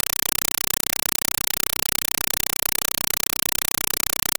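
Throughout, encoded Dolby Digital data reaches the output as ordinary samples without being decoded, a compressed stream played as audio whose pattern fits AC-3. Each frame becomes a 5.33 ms noise burst then silence, 31.25 times a second, replacing the speech with loud, chattering static.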